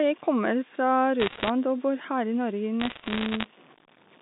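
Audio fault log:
Throughout: grainy distortion that tracks the speech level, likely low bit depth without dither. The grit rides on every syllable and gets rougher as things quieten, with the quietest bits sputtering, which fits truncation to about 7 bits. Error noise sits around 30 dB down.
1.20–1.50 s and 2.80–3.46 s: bit errors on a digital phone line. Sharp ticks and crackle sit over otherwise intact speech, denser in the first burst than the second. Single corrupted samples on the A-law line cause them, each flipped high or sign bit jumping the waveform.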